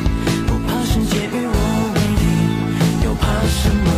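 No technical faults are audible anywhere in the sound.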